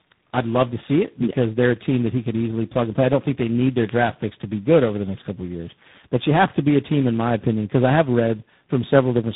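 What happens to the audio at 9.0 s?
At 9.0 s the speech carries tandem speech coding, present throughout the clip rather than at that moment alone. The sound points to roughly three successive speech coders, with the signal decoded and re-encoded at each hand-off so that every stage compresses the previous one's errors. The result is rough, muffled and warbly speech, with nothing above 3.8 kHz, audibly worse than any single coder would produce.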